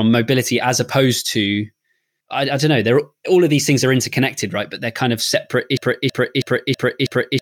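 At 5.77 s the speech locks into a broken-record loop: a fragment of about 0.32 s repeats exactly, back to back, five times and runs to the end of the clip. A stalled player or stream, likely resending its last buffered fragment, would produce this. Whatever should have played there is lost.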